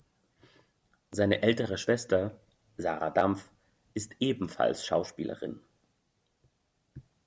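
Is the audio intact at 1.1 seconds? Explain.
No. A repeated buffer occurs at 1.13 s: new audio arrived late, so the device replayed the previous 10 ms piece once more, with a hard join at the repeat. With so short a piece, this is heard as a click or brief buzz, and about 10 ms of sound is lost.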